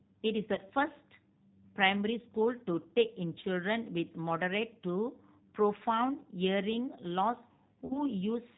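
Throughout the speech, the G.729 codec damage is plainly audible. The voice is rebuilt from a vocal tract filter, a pitch predictor and a few pulses per short frame, so it sounds slightly rough and synthetic. The character fits an 8 kbit/s coder of this family. On a spectrogram, nothing appears above 4 kHz, and the harmonics look smeared and grainy.

Two spots show VoIP packet loss concealed by the speech codec. From 0.55 to 0.6 s the gap fits a single lost 20 ms packet. From 7.86 to 8.01 s it fits two packets, or 40 ms. In each case the decoder keeps repeating its last pitch and filter settings while lowering the gain, so the sound stretches into a buzzy tone or coloured noise that fades. Because each frame builds on the one before, the voice stays weak for a short while after the packets resume. A waveform shows a decaying, overly regular stretch at each spot, and a spectrogram shows flat, repeated harmonics fading out.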